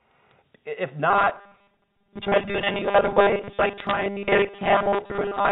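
Bit errors on a digital phone line appear first at 0.31 s, in a single frame. On this A-law telephone line, whose band stops at 4 kHz, a flipped bit corrupts individual samples, and a hit on the sign or an upper bit throws the waveform to a wrong value for an instant, producing the click. A denser burst returns from 3.80 to 3.91 s, where the higher error rate turns isolated ticks into a brief patch of crackle laid over the speech.

Robotic sound from repeated short buffers runs from 1.10 s to the end of the clip. The speech takes on a stiff, metallic 200 Hz buzz. This is likely caused by new audio arriving too rarely, so the playback repeats its last fragment of about 5 ms, which fits that pitch, while most of the real audio is dropped. The voice still follows the rough contour of the words.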